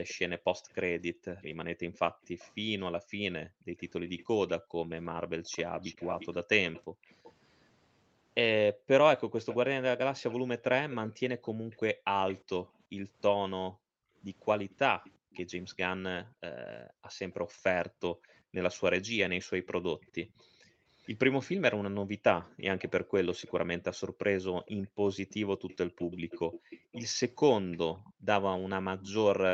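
From 0.08 s to the end, a delayed copy of the speech runs under the main voice. It trails by about 0.41 s. It sits well below the speech, around 15 dB down. This is an echo leak. The likely cause is a far end playing the call on a loudspeaker, with its echo canceller failing to remove everything the microphone picked up. The leftover was sent back. It sounds like a faint second voice, about 0.4 s behind.

Between 1.12 s and 18.54 s, the room sound keeps dipping out. The drops total about four seconds and go as deep as 40 dB. This is background gated by the echo canceller. While the loudspeaker played, the canceller pulled the microphone down hard. The background vanishes briefly, then returns when it lets go. It happens again between 22.44 s and 24.94 s, for only a fraction of a second, reaching 36 dB. From 28.03 s to the end it drops by up to 40 dB once more.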